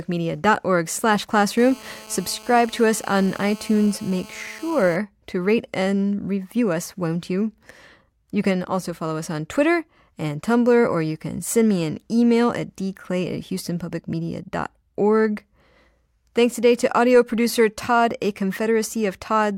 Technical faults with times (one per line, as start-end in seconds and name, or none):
1.57-4.96 GSM phone buzz